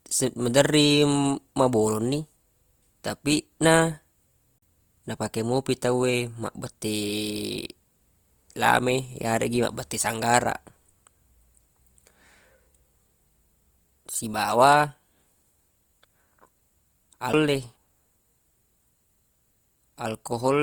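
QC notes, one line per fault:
Throughout, Opus compression: The speech sounds rough and grainy, with noisy texture where tones should be clean. This likely comes from Opus in its CELT music mode at about 24 kbps. It keeps fullband width up to about 20.1 kHz but fills starved bands with folded or noisy content.
4.58 to 4.62 s and 17.33 s, CD skip: Each is a tick or short gap followed by an abrupt jump in the audio. The first falls between "tapi na" and "napake mopi tawwe", with roughly 40 ms of silence. The second is much shorter, a few milliseconds. The laser leapt to another turn of the spiral, so the player muted briefly and resumed elsewhere.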